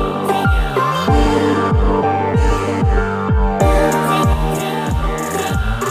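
Channel delay (doubling) sets in at 4.33 s and runs to the end of the clip at 5.90 s. From that point one channel arrives about 46 ms behind the other, which fits a 2048-sample buffer, and once the two are summed to mono the late copy stands apart as a distinct doubling, a single slap echo at the same level as the original sound rather than a blend.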